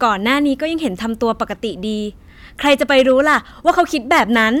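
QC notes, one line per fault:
2.66–4.47 s, hard clipping: across the last stretch of the speech every loud syllable takes on a harsh, gritty fuzz, with crackle riding on the peaks and a brittle edge up in the high frequencies. The level is driven about 6 dB past what the stage can pass, so the waveform's peaks are sheared off flat. Those squared-off tops generate harmonics far above the voice's own content, which is where the rasp comes from.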